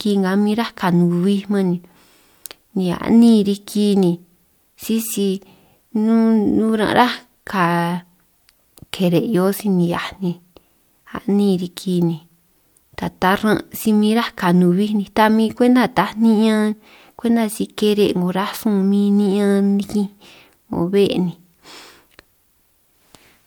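No technical faults can be heard anywhere in this speech recording; the signal holds steady and intact throughout.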